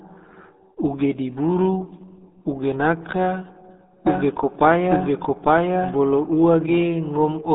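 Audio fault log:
Throughout: RealAudio 14.4 codec. The speech sounds boxed-in and muffled, with a gargling, watery smear on vowels and consonants and no air or sibilant sparkle at all. Nothing above about 3.8 kHz survives, and the usable band sits roughly between 200 Hz and 3.7 kHz. This is the signature of a very low-bitrate dial-up speech coder running at 8 kbit/s, which discards the upper spectrum and coarsely models what remains, leaving heavy artefacts.
4.07–6.79 s: doubled audio track. A second copy of the speech appears abruptly and runs alongside the original about a second behind, at roughly the same loudness, so two overlapping streams compete and the passage becomes confused. The copy carries no reverb tail or room colour and switches off as suddenly as it came in. That points to the same signal likely being mixed in twice, through a slower second capture path or an edit leaving two out-of-step copies.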